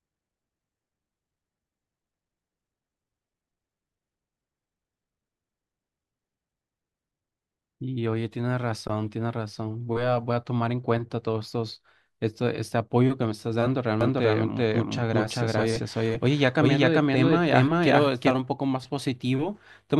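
From 14.0 s to 18.3 s the speech is accompanied by a doubled audio track: a second, full-band copy trailing the original by around 400 ms and at roughly the same level. It carries no decay or room colouring, so it reads as a distinct repeat rather than an echo, and it cuts in and out abruptly at both ends. The likely cause is the same signal being captured a second time through a slower path, or an edit leaving two copies out of alignment.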